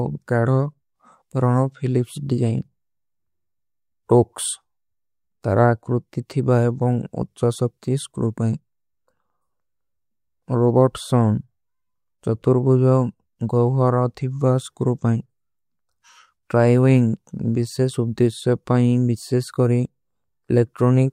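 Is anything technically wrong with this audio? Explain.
No, nothing technically wrong turns up anywhere in this speech recording, so there's nothing here to flag.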